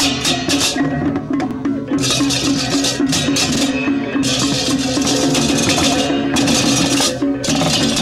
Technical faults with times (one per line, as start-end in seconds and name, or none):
1.51-1.56 overlapping chunks
3.56-3.60 overlapping chunks
5.06-6.95 doubled audio track
5.60-5.65 overlapping chunks
7.65-7.70 overlapping chunks